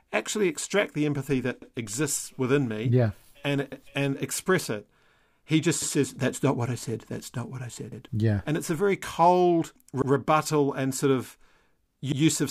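Speech with overlapping chunks: at 1.62, 3.72 ("and express it" follows), 5.82, 7.92 (after "not what I"), 10.02 (after "it's a very cold") and 12.12 s, a 100 ms slice replays as 2 s chunks overlap. Unlike dropouts, nothing is lost; the stutter repeats sound.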